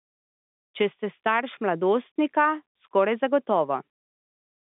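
Nothing stood out on listening to this telephone-band speech, which carries the narrow sound of G.711 telephone coding from beginning to end.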